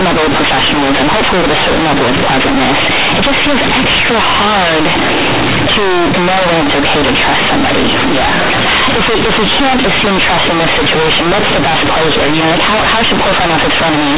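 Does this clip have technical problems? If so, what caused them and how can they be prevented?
Yes. Throughout the speech, companded audio is read as linear: A-law bytes are played back as plain 8-bit samples without expansion. Every sign change then jumps across roughly half the output range, so quiet passages come out as loud as speech peaks. The result is harsh, buzzy distortion and heavy noise in the pauses, over audio that otherwise carries the 4 kHz bandwidth of A-law telephone coding. To prevent it, decode G.711 A-law through its proper expansion table before treating the samples as linear PCM.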